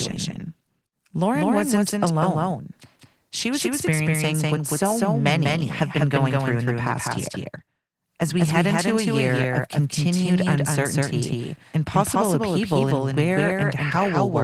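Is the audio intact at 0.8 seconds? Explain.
No. At 0.8 seconds the sound is affected by a doubled audio track, present throughout the clip. A second copy of the speech plays roughly 200 ms behind the first at about the same level, with no decay or room colour. The effect is a flat, stuttering echo rather than reverberation. The likely cause is the audio being captured twice, once through a slower path, or an edit leaving two copies out of step.

The same moment also carries Opus voice compression, again throughout. The encoder appears to run in hybrid mode, with a linear-prediction layer coding the band below 8 kHz and a transform layer above it. The excitation is coded coarsely, which fits a low bitrate around 16 kbps. The damage is plainly audible: the speech sounds muffled and hoarse, with a slightly robotic edge, and both copies of the doubled track carry it.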